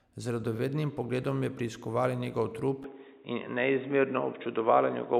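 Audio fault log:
2.84 to 5.19 s, input switched to a poorer device: Right after "pogledom je preiskovala njegov", the speech turns dull and boxy with no gap. Nothing is heard above about 3.8 kHz from there to the end. The level shifts by roughly 5 dB. A new, faint noise floor appears, around 45 dB below the speech. The input likely moved to a narrower-band microphone or a headset call profile, which cuts the highs and adds its own noise.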